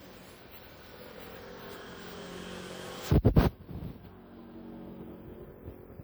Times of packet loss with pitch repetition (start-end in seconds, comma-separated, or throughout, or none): none